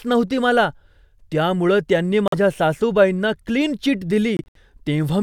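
The speech cuts to silence at 2.28 s for 46 ms, then breaks up between 4.37 and 4.57 s in gaps up to 70 ms long. This is likely a Bluetooth dropout: late packets were discarded, and the sound resumes as if it had kept playing.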